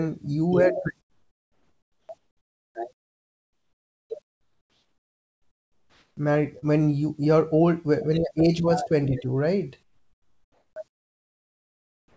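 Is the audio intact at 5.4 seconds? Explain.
No. From 4.22 to 6.17 s the real background drops out and a steady, featureless hiss about 4 dB quieter takes its place. This is likely comfort noise in place of the background: the sender paused transmission during silence and the receiver synthesised filler noise.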